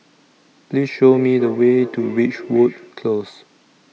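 From 0.93 to 3.0 s there is feedback echo between two devices. One device replays what the other's microphone sent, and that microphone captures it again. The speech returns roughly every 0.4 s, peaking about 12 dB below the direct sound.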